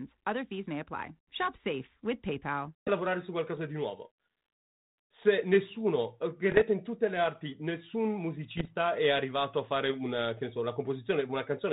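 At 6.50 to 6.61 s and 8.57 to 8.70 s, bit errors on an ADPCM link throw the decoder's predictor off, causing rough pops that show as broadband vertical streaks and jagged waveform spikes.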